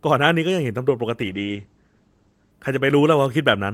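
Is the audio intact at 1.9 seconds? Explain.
No. A call bitrate drop runs from 1.2 to 2.59 s: the encoder's budget falls from 64 to 11 kbps and holds near that floor for about 1.33 s, coding the speech coarsely and cutting the audio band from 20 kHz to 8 kHz, so 1.9 s sounds muffled and rough.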